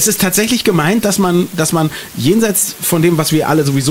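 An unreliable data bit runs through the whole clip: one line in the digital path is marginal, so its bit flips wrong in a random fraction of samples. Each wrong bit adds or removes the same fixed amount, a step of about -22 dBFS, producing identical sharp spikes scattered at random. Together they form a continuous crackle or fizz that sits under the sound and carries on unchanged through the quiet gaps.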